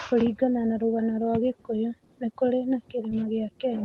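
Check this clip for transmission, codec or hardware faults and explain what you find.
One transmission fault stands out. Just after "nikũrĩ na", from 3.09 to 3.13 s, the sound briefly smears and wobbles. This is short concealed packet loss: about 20 ms of audio arrived too late, so the receiver extended the preceding sound to cover the gap, then blended back into real audio. The speech passes through a call codec whose top end stops around 12 kHz.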